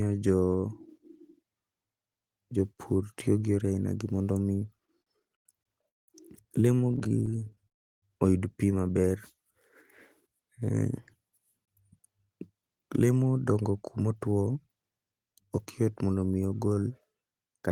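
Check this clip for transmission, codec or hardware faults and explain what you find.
Several transmission faults affect this speech clip, clustered between about 4.9 and 15.8 s.

Repeated stalls (stutter) occur from 4.85 to 6.10 s, with eight gaps (longest 191 ms) concealing about a third of the span, and again from 6.76 to 7.68 s with thirteen shorter gaps. Late packets kept draining the jitter buffer, so the last sound was stretched. Speech drags and stammers, and a spectrogram shows smeared, repeated frames.

A gap between chunks appears at 5.63 s and at 11.65 s, each 23 ms and 6 s apart. Chunked delivery left silence at each join. These are brief hard-edged holes that show as flat-line notches in the waveform and clean vertical blank stripes in the spectrogram.

From 7.68 to 8.04 s a call audio freeze holds the sound, then falls to about 340 ms of silence before speech resumes where it stopped. 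The likely cause is held-up packets emptying the jitter buffer. The waveform shows a fading tail, then a flat gap.

A jitter buffer speed-up runs from 11.95 to 15.84 s at 111% speed, trimming roughly 0.4 s by cutting short pitch-period slices to reduce built-up delay. Speech sounds hurried at unchanged pitch. The spectrogram's harmonics stay level while syllables are compressed in time.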